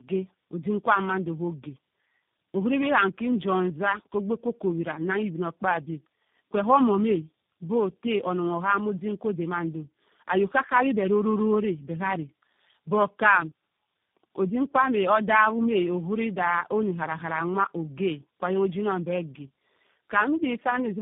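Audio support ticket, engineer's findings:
Tandem speech coding, throughout: rough, muffled, warbly speech, band-limited to about 3.7 kHz. Sound points to three speech coders in series, likely ending in G.729A, each recoding the last one's losses. Degradation compounds beyond what any single narrowband codec produces.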